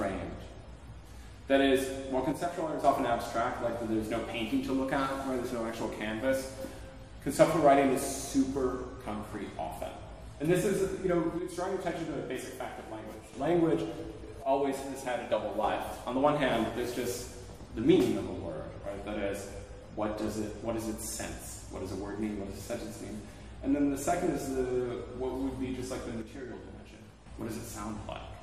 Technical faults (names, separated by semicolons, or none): one channel drops out